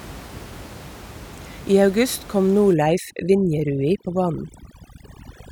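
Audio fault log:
2.74–5.52 s: overdone noise removal. Overly strong noise reduction suppresses bands near the room-noise floor, about 19 dB below speech, leaving twinkling specks.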